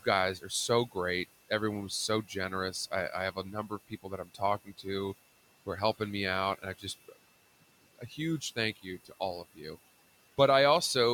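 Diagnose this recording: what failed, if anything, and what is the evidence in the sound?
A switching supply whistle sits in the analogue power or wiring stage for the whole clip. It is a thin high tone wandering between 2.64 and 2.68 kHz, roughly 25 dB below the speech. Mains hum would be low and fixed at harmonics of 50 or 60 Hz. This tone is high and drifts in pitch, which points to a converter running in audible burst mode.

Noise suppressor artifacts come from call processing and run throughout. The room noise, about 19 dB below the speech, sinks in the gaps and swells back under the speech. Codec artefacts would smear the speech itself. Here the background gain pumps in step with speech activity, the sign of frame-by-frame spectral subtraction.

Speech cut by the noise suppressor, in the same processing stage, appears at 0.38–0.96 s, 1.89–4.86 s, 6.58–7.17 s just after "are helping me out", 7.61–9.21 s just before "all of", and 9.54–9.77 s just after "all of". 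Quiet consonants and endings sink by about 13 to 17 dB. They sound swallowed rather than silent. A network dropout would cut everything abruptly, while here only the soft parts are turned down.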